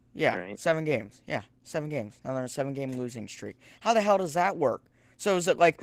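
Speech run through Opus voice compression the whole way: it sounds hoarse and slightly robotic, and the highs are thin, which fits a low rate around 16 kbps using SILK with a sparse CELT layer up top.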